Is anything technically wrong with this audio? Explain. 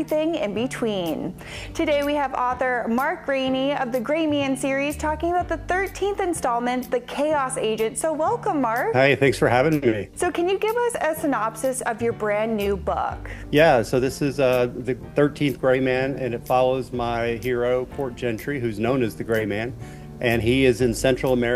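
No, nothing technically wrong can be heard here.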